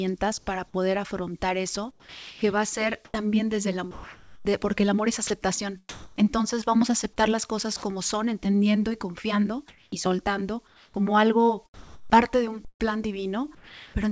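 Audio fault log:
0.38–0.47 s and 9.68–13.94 s, comfort noise in place of the background: At 0.38 s the real background, about 35 dB below the loud passages, gives way for 90 ms to a smooth, detail-free hiss about 6 dB quieter. Across 9.68–13.94 s the same substitution covers about 1.4 s in total. The likely cause is discontinuous transmission: the sender goes silent in pauses and the receiver synthesises noise roughly matched to the background's spectrum.
1.91–6.25 s, sound chopped by the voice detector: Over this stretch the sender's voice detector repeatedly toggles between transmitting and muting, so about 1.44 s of material is replaced by synthetic fill. Quiet edges of the sound drop out. The choppy result is likely the detector switching discontinuous transmission on and off, with a 64 kbps G.722 call path that carries nothing above 8 kHz.
13.55–13.94 s, sound dropped by the voice detector: Near the end, the detector treats a low-level portion as background and stops sending. 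About 0.39 s is replaced, and roughly 0.28 s of actual sound is lost, leaving steady generated noise where content should be. This likely points to the detector mistaking quiet sound for background.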